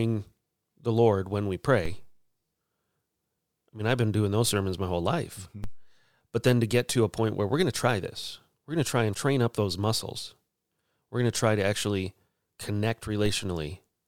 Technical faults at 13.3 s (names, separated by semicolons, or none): DC step